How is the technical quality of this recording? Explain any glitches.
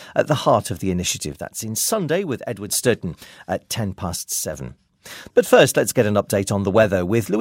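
Two brief level dips spoil the recording. One channel drops out from 1.33 to 2.69 s and from 4.16 to 4.53 s: the sound suddenly falls about 6 dB, likely because one stereo side went silent before the mono sum.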